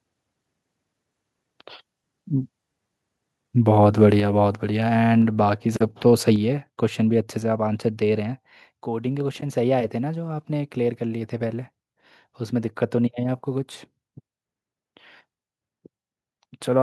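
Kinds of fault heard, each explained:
Microphone overload: Between 4.02 and 4.05 s the loudest syllable turns briefly harsh and crackly. The input level was likely set too high, so the peaks went past the converter's full scale by about 1 dB. On the waveform the tops of those peaks are squared off flat for a small share of the samples. On a spectrogram the moment shows a thin vertical smear of added high-frequency energy.
Microphone volume stepped down: Soon after that harsh peak, everything in the signal drops in level, voice and background together, in three abrupt steps: about 4 dB at 4.2 s, about 2 dB at 5.22 s and about 4 dB at 6.36 s. This is likely the call software cutting the device's input volume to stop the overload. The waveform envelope shrinks in clear stair-steps, and a spectrogram shows every band darkening at once at each step.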